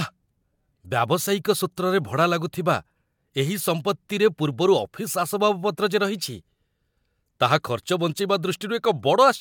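A short bit of recorded speech, and there's nothing here to flag on the technical side.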